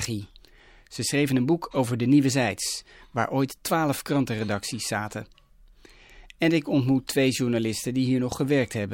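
No technical faults can be heard at any point in the recording. The speech runs continuously, with nothing in the signal drawing attention to itself.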